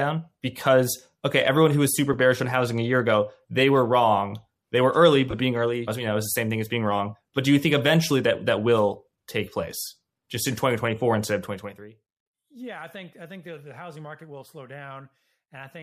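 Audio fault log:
0.39 s, 2.13 s and 5.31–5.33 s, lost LE Audio frames: dropouts of 7.5, 7.5 and 22.5 ms where the decoder replays the last spectrum with random signs, producing brief noisy smears.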